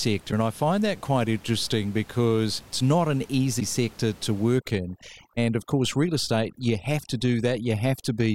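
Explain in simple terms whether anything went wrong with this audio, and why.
Three brief glitches, each lasting about 30 milliseconds, make the sound skip: at 0.30 s just before "and I find that", at 3.59 s between "because it's not an" and "sector to", and at 5.00 s. This is likely a broken MP3 bit reservoir. Parts of the audio were cut out, so the next piece of the file reached back for data it had stored earlier and found the wrong bytes.

From 4.59 s, right after "sector to", until the end, the background drops and breaks up into twinkling, warbling specks. That is overdone noise removal. A cleanup tool set too aggressively removed the faint room noise and, along with it, the quiet parts of the voice.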